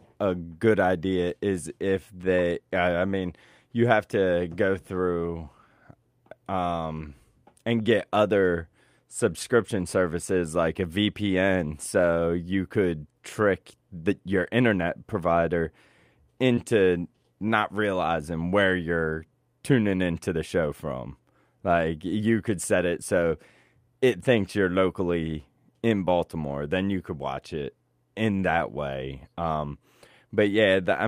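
Short concealed packet loss at 16.55 to 16.59 s: about 20 ms of the speech arrived too late for the decoder, and the receiver patched roughly 17 ms of it by extending the preceding sound before blending back in, leaving a brief smear or wobble.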